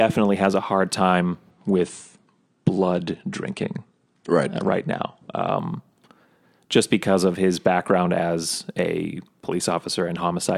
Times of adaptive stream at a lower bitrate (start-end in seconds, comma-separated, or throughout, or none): 1.50-5.50